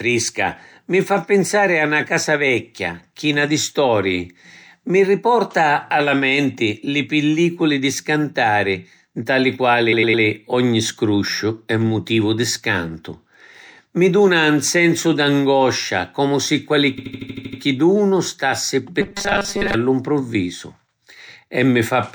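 At 9.92 s there are repeated frames: a 104.5 ms chunk, which fits a block of four compressed frames, plays three extra times through 10.23 s, giving a stuttering loop. It happens again from 16.97 to 17.60 s, with a shorter 78.4 ms block looping eight extra times. Together the two stutters stretch the audio by about 0.94 s.

From 19.01 to 19.74 s the speech turns into a robotic sound from repeated short buffers, a rigid metallic buzz at 200 Hz that roughly tracks the speech. That fits a 5 ms slice being replayed, likely because new audio arrived too slowly, so most of the real sound in that stretch is skipped.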